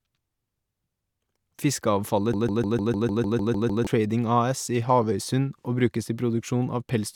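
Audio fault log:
2.34 to 3.87 s, broken-record loop: the speech suddenly catches on a tiny fragment, about 0.15 s long, and plays it back to back ten times in a row, like a stuck CD. The stutter is exact each pass, which is why it sounds mechanical rather than like a natural hesitation. Whatever should have been heard in those 1.5 seconds is simply gone. Most likely the player or stream stalled and kept resending the last chunk it had buffered.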